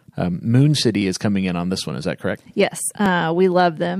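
Regular ticks at about 1.02, 2.04 and 3.06 s, one each second: periodic USB or driver dropouts, skipping roughly a millisecond of the speech each time.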